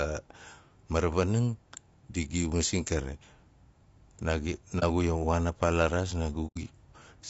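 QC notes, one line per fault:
throughout, low-delay AAC compression: the speech has a rough, grainy texture, with a hiss-like fill between the harmonics and a top band that sounds thinned and somewhat synthetic. The damage is plainly audible. This is likely AAC-ELD at around 32 kbps, the low-delay coder used for calls. Its very short frames cannot separate closely spaced pitch harmonics well, and at this bitrate too few bits remain to code the spectrum cleanly.
4.79 to 4.84 s, and 6.47 to 6.58 s, just after "a paa la raas", AAC frame loss with muting: the sound fades into a brief, soft-edged gap and then fades back. The first gap is short, which fits one lost frame of about 30 ms. The second is roughly three times as long, which fits three consecutive lost frames. The decoder zeroed the missing spectrum, and the overlapping windows smeared the edges into gentle fades.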